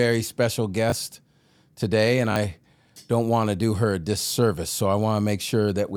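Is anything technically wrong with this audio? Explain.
Yes. Repeated buffers occur at 0.90–0.92 s, at 2.32–2.36 s after "today and", and at 4.28–4.30 s after "to do her a". New audio arrived late, so a piece consistent with a 20 ms buffer replayed once, twice at 2.32 s, giving a brief stuttering buzz with hard joins.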